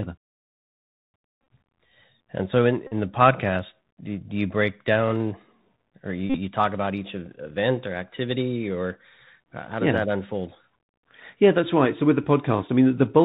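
Throughout, the speech sounds dull and band-limited, with scratchy s sounds and a granular hiss underneath. This is the Bluetooth CVSD headset codec, whose one-bit 64 kHz delta modulation cuts everything above 4 kHz.

Brief buzzy stutters break in at 1.40–1.50 s, at 2.87–2.94 s between "so in" and "the podcast do do", and at 6.30–6.37 s between "or you" and "talk about each event". Each is a Bluetooth headset packet repeated: lost packets were refilled by decoding the previous one again, about 45–64 ms in total each time.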